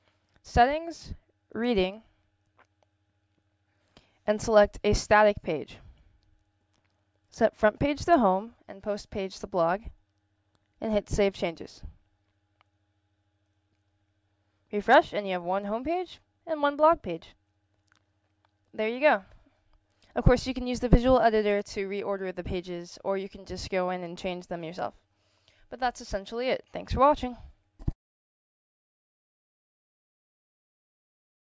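Nothing in the signal points to a technical fault at any moment; level, continuity and timing all hold steady across the whole recording.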